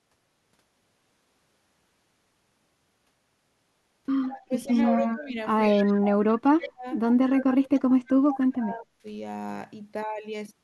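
From 4.23 to 5.11 s a faint copy of the speech trails the original by 139 ms, about 15 dB down. This echo leak is likely a loudspeaker-side echo canceller letting residual pickup through. On a spectrogram it looks like a weaker duplicate of the harmonic striations shifted right. It returns at 5.62–5.96, 6.63–6.67 (about 20 dB down), 7.37–7.56 and 8.34–8.43 s.

Overlapping these, the main speech is pushed down while the far side is also playing, the sign of speech suppressed in double talk. The likely cause is the canceller failing to separate talker from echo. The waveform envelope collapses and the spectrogram shows darkened gaps. From 4.48 to 5.36 s the speech dips by roughly 15 dB for about 0.4 s. From 5.72 to 6.87 s it drops by up to 30 dB for about a second. From 7.47 to 9.05 s it drops by up to 35 dB over about 1.5 s.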